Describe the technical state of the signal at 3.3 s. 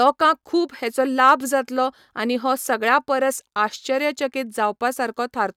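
At 3.3 s the speech signal is intact, with no dropout, clipping, distortion or other fault audible at that point.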